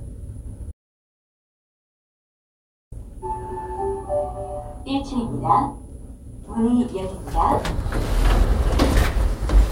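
A clip of everyday sounds with two faults. From 0.72 s to 2.92 s there is an audio dropout to silence: the sound cuts off abruptly and about 2.2 s is replaced by silence with no room tone, most likely because the input signal was lost while recording continued. From 7.43 s to the end, Wi-Fi interference appears as a regular tick every 102.4 ms, roughly ten per second, sitting roughly 20 dB below the wanted sound, consistent with a nearby radio's transmissions being rectified in the audio circuit.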